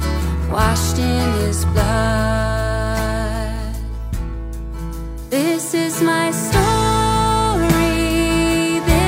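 No technical faults can be heard at any point in the audio.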